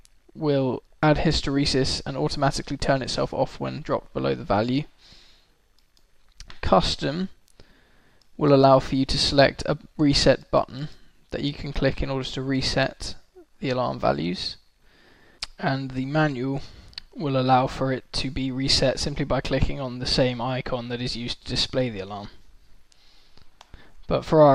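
Nothing in the audio points to a technical fault anywhere along the way, so there's nothing to flag here.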